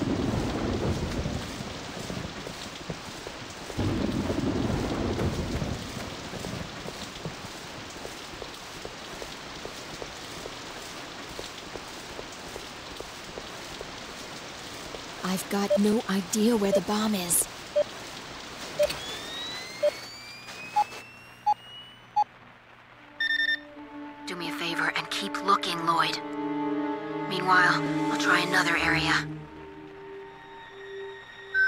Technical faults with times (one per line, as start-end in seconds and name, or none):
0.56-31.27 clock drift buffer slips